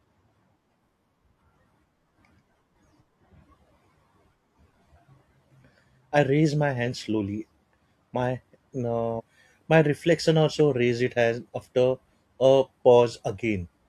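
At around 9.15 s the speech abruptly jumps forward, with a short blip that lasts until about 9.21 s, and then the talk carries on from a later point as if a chunk had been cut out. That's the signature of a stream segment skipped: one piece of the segmented stream most likely failed to load, so the player dropped it and went straight on to the next, losing a slice of the programme.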